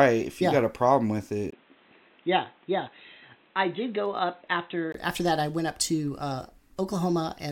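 At 1.50 s the speech abruptly turns dull and boxy after a tiny gap of about 20 ms. It stays that way until 4.94 s, when full clarity returns. In that stretch nothing above 4 kHz survives, the level sits a few decibels lower, and a faint new background noise appears well beneath the speech. This is likely an input switched to a poorer device: the recording jumped to a narrower-band microphone or headset with its own tone and noise.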